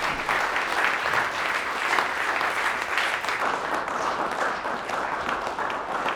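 A section at the wrong speed, likely from playback against a mismatched clock, runs from 3.42 s to the end at 6.16 s, slowed to 0.756 times its recorded rate. Pitch drops with it, about five semitones lower, so the sound turns abruptly deeper and more sluggish.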